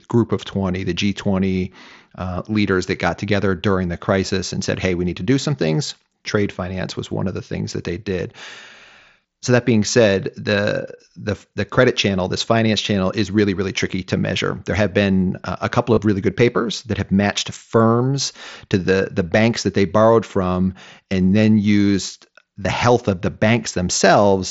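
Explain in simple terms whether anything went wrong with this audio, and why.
Concealed Bluetooth headset packet loss occurs twice: at 15.94 to 15.97 s, between "been uh a couple" and "really good papers that", and at 22.63 s, between "from and then used" and "health of the". Both times, a brief slice of audio never reached the phone. The phone filled each gap by repeating a closely matching piece of the sound just before it. Because each gap is a run of lost packets (about 30 ms and 15 ms), the patch sounds like a brief buzzy tone, with a small warble as the real audio resumes.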